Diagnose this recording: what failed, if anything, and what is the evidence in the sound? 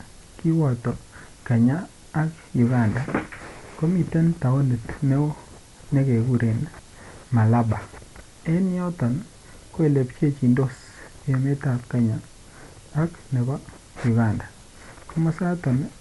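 Codec stage, likely Dolby Digital compression: the speech has a flat spectrogram ceiling at 11.5 kHz, and bit-starved lines filled with dither give rough flutter.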